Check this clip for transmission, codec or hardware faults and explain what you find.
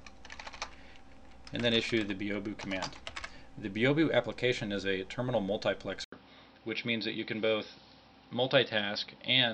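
One fault is present: an input switched to a poorer device. At 6.04 s the sound breaks for 80 ms, then runs to the end with nothing above 5.6 kHz, a dull tone and a faint new background noise at similar level. This is likely a move to a narrower-band microphone. A spectrogram shows a hard ceiling at 5.6 kHz after a short blank column, and the waveform shows a brief flat line.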